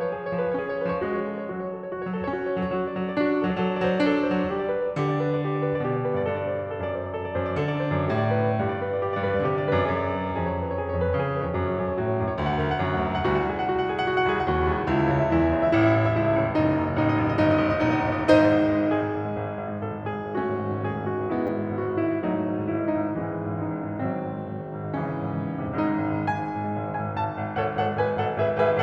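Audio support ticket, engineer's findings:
Repeated buffer at 21.47–21.49 s: output device starved and replayed its last 10 ms buffer twice more, giving a brief buzzy stutter in the music with hard joins.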